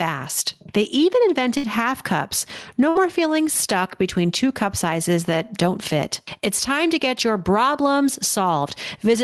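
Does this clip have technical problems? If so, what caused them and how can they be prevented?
Yes. The speech has gain pumping from start to finish. The swing is around 10 dB. The likely cause is input gain set far too high, with a fast limiter or compressor clamping down on every loud syllable. Loud and quiet passages end up squeezed together, and the sound feels crushed. To prevent it, lower the microphone gain so the limiter rarely engages.

There are two bursts of packet loss, at 1.57 to 1.66 s and 2.89 to 2.98 s. Each is roughly 90 ms long. Packets were lost or arrived too late to play. The receiver stretched the last sound for about 60 ms and faded it out, so you hear a held buzz or a fading hiss. About 60 ms of speech is then skipped, and the speech resumes further on. To prevent it, use a more stable connection, such as wired rather than congested Wi-Fi.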